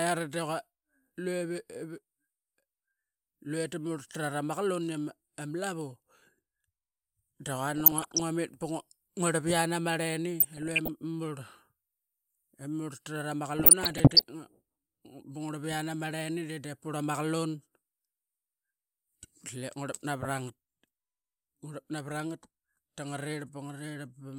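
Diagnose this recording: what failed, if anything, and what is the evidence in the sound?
Short noise blips cut through the speech at 7.74–8.20 s, at 10.40–10.89 s just after "ama rleni", and at 13.56–14.24 s after "trat ama". This is DAB burbling in the codec stage. Bit errors of under one percent slip past error correction, corrupting MP2 samples and scale factors, so single sub-bands get short blips of noise and, where scale factors are hit, jump in level for up to a frame.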